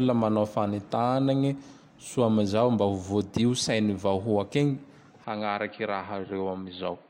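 At 5.24 s the speech abruptly turns duller and boxier and stays that way to the end, with no gap at the transition. Nothing above about 4.6 kHz survives, the level falls by roughly 5 dB, and a faint new noise floor appears around 50 dB below the signal. The likely cause is an input switched to a poorer device, with capture moving mid-recording to a narrower-band device that has its own tone, gain and background noise.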